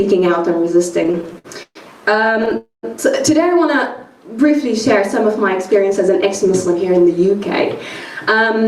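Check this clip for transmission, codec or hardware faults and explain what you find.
Three delay-related faults are audible in the sound.

Repeated stalls (stutter) at 1.03–1.77 s and 2.25–2.53 s: late packets repeatedly emptied the jitter buffer, and the receiver stretched the last sound to fill eight gaps (longest 128 ms), then six brief ones, so the audio drags and stutters.

Call audio freeze at 2.57–2.85 s: the sound holds as a fading continuation, then about 140 ms of silence, adding a 257 ms gap, likely from packets held up in transit.

Jitter buffer speed-up at 5.53–6.75 s: the receiver trimmed short pitch-period pieces, around 70 ms in total, to shrink excess delay, so the audio runs 6% faster at unchanged pitch and sounds hurried.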